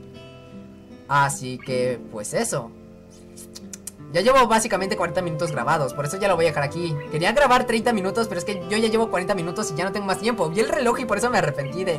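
Nothing in the audio stood out as a technical problem on listening.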